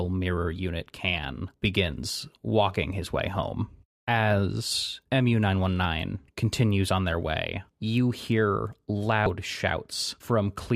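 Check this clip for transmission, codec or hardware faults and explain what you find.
One fault turns up in this speech clip. From 9.26 to 9.30 s, right after "their way you hear", a brief glitch breaks through. That is damaged data in a compressed stream: corrupted bytes made the decoder misread frames, lose sync and hunt for the next header.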